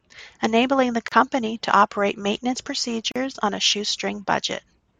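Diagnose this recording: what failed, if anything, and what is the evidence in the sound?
Gaps at a join of encoded pieces, a codec-stage fault: 32 ms at 1.08 s, before "to operate maintenance", and 40 ms at 3.12 s, before "on a 'shoe", two seconds apart. Separately encoded speech segments were joined untrimmed, so start delay and last-frame padding open slightly smeared silences.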